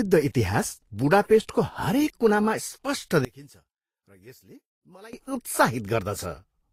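Right from the start the speech carries a layered, smeared lossy character, and it's most likely transcoding between lossy codecs: a chain that points to Vorbis at a low rate, roughly 34 kbit/s, re-encoded to Opus at about 48 kbit/s. The second encoder wastes bits chasing the first one's swirly artefacts while adding its own, so you hear two flavours of damage stacked together, and nothing survives above 15.8 kHz, the lowest cut-off in the chain.

From 3.25 to 5.13 s the speech suddenly drops by about 24 dB, then comes back. That's the signature of one channel inverted, likely a polarity flip on one side during that stretch. When the two channels are summed, the centred material, which is the voice and the background alike, cancels almost completely, leaving only a faint residue from whatever small differences exist between left and right.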